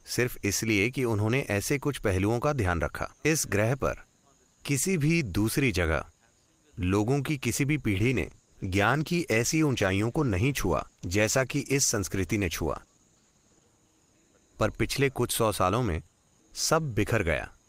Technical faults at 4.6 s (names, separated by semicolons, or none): none